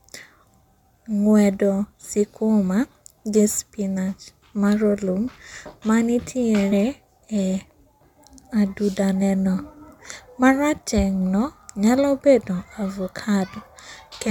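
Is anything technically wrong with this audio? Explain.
Yes, there is one fault. At about 6.71 s the speech is interrupted by damaged data in a compressed stream: a short run of corrupted bytes makes the decoder misread the frame, lose sync and hunt for the next valid header. It is heard as a brief chirp or blip. On a spectrogram it appears as a thin vertical smear of broadband energy unrelated to the surrounding harmonics, and the waveform shows a sudden jagged discontinuity.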